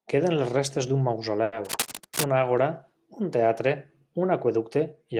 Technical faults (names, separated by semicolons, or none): short stall from a late packet; cable scratch noise